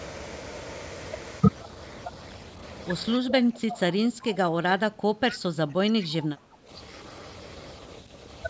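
From 3.15 to 6.7 s, the echo canceller likely could not separate the talker from loudspeaker echo during double talk, so speech was suppressed in double talk: the voice dips by up to roughly 15 dB, for about three seconds in all. At 5.31 to 5.35 s, an echo leak likely let loudspeaker sound through, returning a brief scrap of voice 242 ms late, around 15 dB below the speech.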